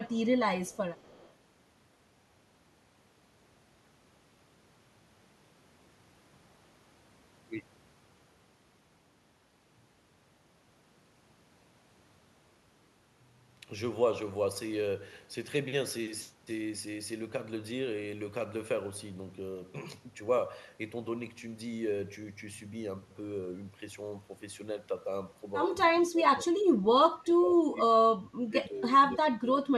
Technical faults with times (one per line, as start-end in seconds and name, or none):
0.05-0.10 echo leak
0.66-1.31 echo leak
26.06-26.46 speech suppressed in double talk
27.11-28.93 speech suppressed in double talk
29.19-29.68 speech suppressed in double talk